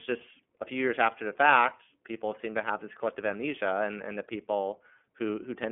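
iLBC codec damage runs through the whole speech clip, from start to finish. The codec encodes each 30 ms frame's excitation on its own, without drawing on the previous frame, and the plainly audible roughness and slightly synthetic texture fit its 13.33 kbps mode. The sound is confined to a narrow telephone band of roughly 200 Hz to 3.4 kHz, with nothing at all above 3.6 kHz, so the speech comes across thin and muffled.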